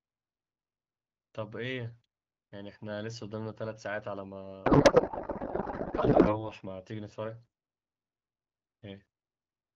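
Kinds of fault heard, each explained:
Codec payload misread: from 4.65 to 6.50 s the AMR-WB stream is decoded with its bits unpacked in the wrong layout, consistent with octet-aligned frames being read as bandwidth-efficient. The decoder therefore pulls parameters from the wrong bit positions, and the speech gives way to garbled noise and warble that barely tracks it. A spectrogram shows harmonic striations and formant bands collapsing into smeared, patternless energy. The waveform's envelope stops following syllables until normal decoding resumes at 6.50 s.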